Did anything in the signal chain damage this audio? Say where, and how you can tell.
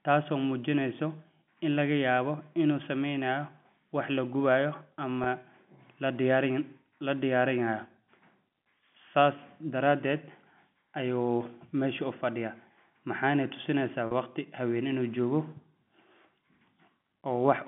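Yes. Packet loss with pitch repetition at the network stage: about 20 ms of the G.711 stream went missing at 5.24 s and 40 ms at 14.07 s. The receiver looped the last pitch period to fill each gap, heard as a brief, held, buzzy tone.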